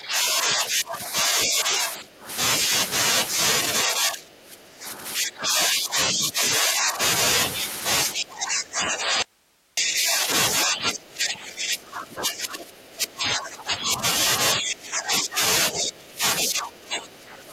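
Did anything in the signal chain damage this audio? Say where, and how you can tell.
Yes. The speech is suppressed in double talk, likely by the call processing's echo canceller, at 0–2.28, 3.84–6.42, 6.58–6.99, 8.14–10.27, 10.64–14.04, 14.55–15.41, 15.72–16.22 and 16.41–17.53 s. The speech is pulled down by about 10 to 25 dB, and the waveform envelope sags in patches.

There is also an audio dropout to a faint residue from 9.22 to 9.77 s, about 0.55 s long. The speech cuts off abruptly and leaves only hiss about 40 dB down. This is likely a network or buffer loss. It shows as a hard-edged gap in the waveform and a faint flat noise band on the spectrogram.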